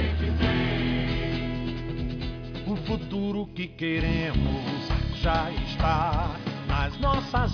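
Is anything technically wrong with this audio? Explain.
No, nothing is technically wrong with this audio.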